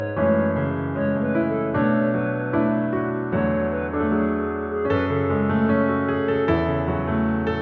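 No technical faults can be heard anywhere in the audio.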